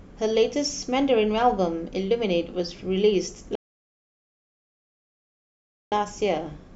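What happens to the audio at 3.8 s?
At 3.8 s the speech falls into a rebuffering stall, silent from 3.55 to 5.92 s. The player ran out of downloaded audio and waited, adding about 2.4 s. It then resumes exactly where it stopped, with nothing skipped. The waveform shows a flat line and the spectrogram a blank gap.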